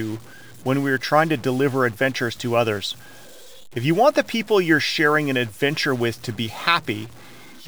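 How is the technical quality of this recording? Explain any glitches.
The recording has a persistent distortion fault from start to finish.

Stuck bit: throughout the clip, a harsh, buzzy grain rides on the speech, and the pauses fill with a constant noise at about -40 dBFS instead of going quiet. The likely cause is a single data bit held permanently at 0 or 1, which pushes roughly half the samples off by that bit's fixed weight. Because the error follows the waveform and flips with small signal swings, even near-silent passages turn noisy. Unlike clipping, this damage doesn't concentrate on loud peaks and also fills the quiet gaps.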